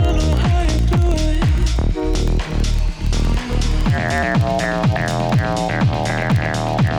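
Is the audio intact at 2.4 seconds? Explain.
No, at 2.4 seconds the filter restarted on every block fault is present, as it is across the whole clip. The filter discards its memory at each block boundary and starts again from silence, so every new block opens with a small transient. These repeat at 21.5 Hz, which fits a 2048-sample block, and are heard as a low, regular buzz of ticks whose loudness rises and falls with the level of the sound.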